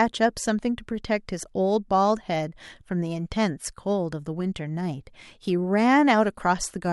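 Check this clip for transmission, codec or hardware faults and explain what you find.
No faults can be heard.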